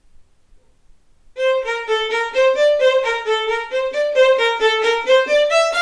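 No technical faults can be heard anywhere in the recording, and the signal stays steady and intact throughout.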